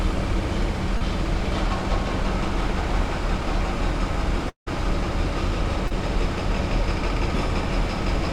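A brief smear at 0.97 to 1.02 s, and again at 5.87 to 5.92 s, is short concealed packet loss: about 40 ms of audio arrived too late, and the receiver papered over roughly 30 ms of it by extending the preceding sound before blending back. From 4.49 to 4.68 s the sound trails off into a fading continuation and then about 110 ms of silence before resuming with a chunk gone. That is likely a long network dropout, with roughly 180 ms never delivered.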